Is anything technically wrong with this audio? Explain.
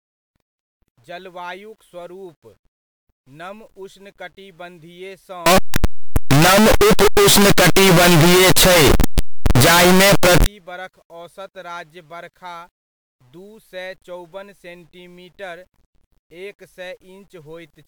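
Yes. Signed and unsigned mixed up, from 5.46 to 10.46 s: the speech turns into very loud, harsh distortion, and its quiet moments blast as hard as the rest. The likely cause is 8-bit samples read with the wrong sign convention, so the top bit flips and every zero crossing jumps across the whole range.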